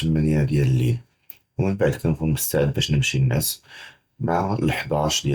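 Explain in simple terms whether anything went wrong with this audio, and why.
Nothing went wrong; this speech recording has no faults.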